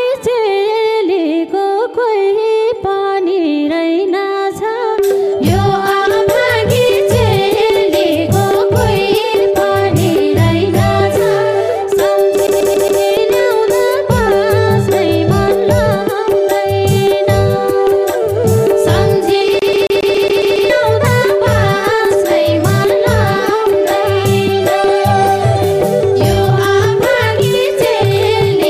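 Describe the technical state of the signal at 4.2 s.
At 4.2 s the signal is intact, with no audible technical fault at that moment.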